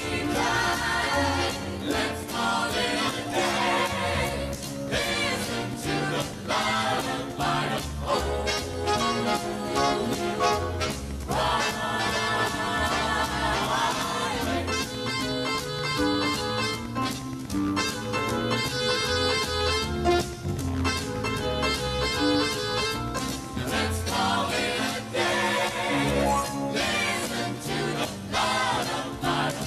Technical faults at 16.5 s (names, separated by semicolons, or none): train of clicks